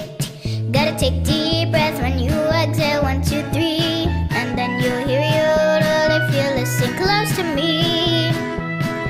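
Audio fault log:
No faults heard anywhere in this clip.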